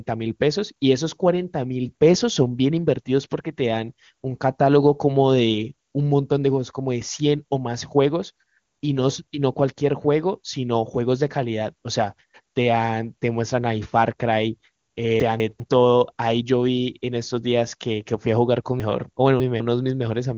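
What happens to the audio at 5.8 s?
Nothing goes wrong at 5.8 s: the speech carries on intact through that moment, with only the expected wideband limit from the AMR wideband (HD Voice) codec, so no content is heard above about 7.3 kHz.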